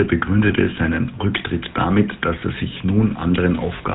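From the start, the speech carries the buzzy, gravelly roughness of the GSM full-rate codec, and it is plainly audible throughout. The coder rebuilds the voice from a vocal-tract model driven by a sparse, regularly spaced pulse train, so the grain sits inside the voice itself rather than riding on top as hiss. Nothing comes through above 4 kHz, which sets it apart from a simple low-pass muffle: the band is dull, and the remaining tone is also rasped. The character fits the 13 kbps GSM coder.

Two brief lost GSM frames break into this, one at 0.48 to 0.52 s and one at 2.40 to 2.43 s, each about 20 ms of missing signal. At each point the decoder reuses the last good frame's settings. The result is a short, rough metallic ring smeared over the gap. A dropout would leave a hard hole of silence, and a click would be a sharp tick. Here the sound is briefly frozen and buzzes. Neither loss lasts long enough to fade fully to silence.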